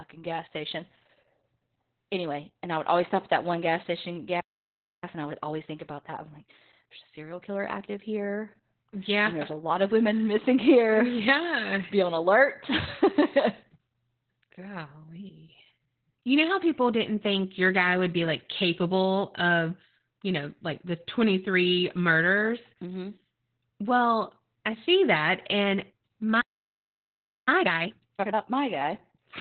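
Opus voice compression runs through the whole clip. The speech is squeezed into a narrowband channel topping out near 4 kHz, so it sounds muffled, hoarse and faintly robotic, a coarse SILK coding that fits a bitrate around 8 kbps. Unlike a simple low-pass filter, it also roughens the texture of the voice.

At 4.40 s a playback stall cuts the sound off for about 0.62 s, likely because the player ran short of data. Clean silence then a resumption at the same point marks it apart from packet loss, which glitches or fills in.

From 5.04 s to 8.04 s comes time-compressed catch-up. The speech runs about 1.15 times fast at its normal pitch as small pieces are cut out, unlike a speed-up that raises pitch.

A second playback stall at 26.41 s silences the audio for about 1.06 s. Catch-up then follows from 27.48 s to 28.52 s at double speed, hurried but still unshifted in pitch.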